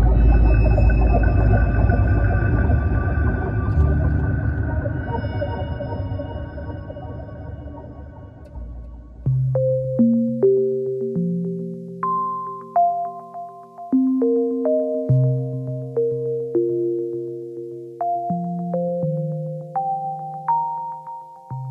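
No technical faults can be heard anywhere in the recording, and the signal holds steady from its first moment to its last.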